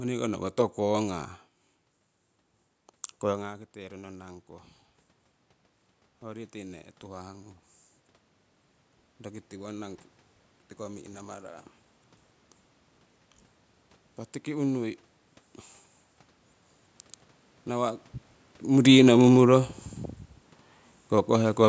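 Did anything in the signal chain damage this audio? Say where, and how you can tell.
Yes: automatic gain rising in call processing lifts the level by about 4 dB from 9.24 to 11.6 s. The room noise swells along with the voice, which a talker moving closer wouldn't cause.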